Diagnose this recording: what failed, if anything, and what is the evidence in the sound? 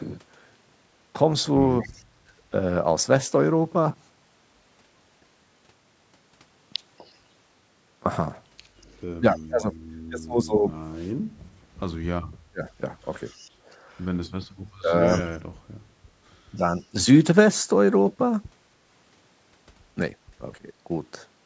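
Speech suppressed in double talk, in call processing: the talker dips at 1.83–2.08 s, 9.18–16.95 s and 20.59–20.9 s, up to roughly 35 dB, likely the canceller ducking both sides.

Background gated by the echo canceller: room sound briefly drops about 6 dB at 2.36–2.4 s and about 8 dB at 13.56–13.67 s while the far end plays.

Echo leak: a faint copy trails 245 ms behind at 6.98–9.39 s and 13.26–15.21 s, roughly 20–30 dB down, likely residual loudspeaker pickup the canceller missed.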